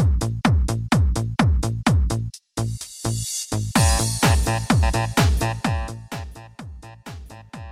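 No technical fault can be heard anywhere in this audio, and its signal stays intact throughout.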